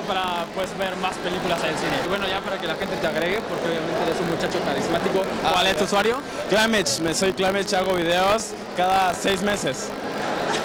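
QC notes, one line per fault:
Throughout: buffer tearing, 50 Hz rattle as a sliver of each period replays sound around 40 ms old; hard splices show as vertical spectrogram stripes every 20 ms.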